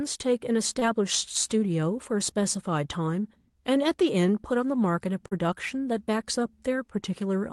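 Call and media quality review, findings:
Short concealed packet loss at 0.79–0.83 s and 5.27–5.33 s. Brief smeared wobble in the speech. About 20 ms and 40 ms of audio missing. The receiver extended the preceding sound, then blended back. Call path band-limited near 12 kHz, consistent with Opus.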